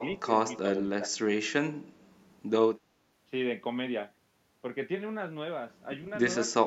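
Speech with brief level dips at 0 to 0.04, 0.62 to 0.83, 0.99 to 1.08 and 6.52 to 6.57 s, dropping roughly 5 to 20 dB, likely speech suppressed in double talk, ducked rather than cut to silence like dropouts.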